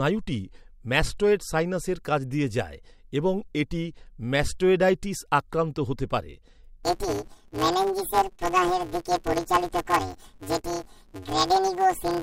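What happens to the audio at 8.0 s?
At 8.0 s the speech is inside a span of planar audio read as interleaved, running from 6.83 s, just after "ম্যাস্টয়েডাইটিস আক্রান্ত হতে পারে", to the end of the clip. Each 5.33 ms block, which fits a 256-sample block, stores all left samples before all right samples, but playback treats them as alternating pairs. Each block plays as a double-speed left half and then a right half. Because the blocks are this short, the result is a robotic buzz at about 188 Hz rather than a clear octave shift.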